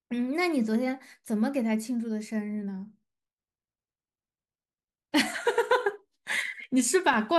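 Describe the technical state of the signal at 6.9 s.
At 6.9 s the speech carries a regular tick, a click that recurs every 0.5 s between 6.14 and 7.14 s, about three in all, heard only while speech is present. These are periodic USB or driver dropouts: something stalls the USB bus or audio driver on a fixed schedule, and each stall skips roughly a millisecond of audio outright. The sudden join in the waveform at each gap produces the click.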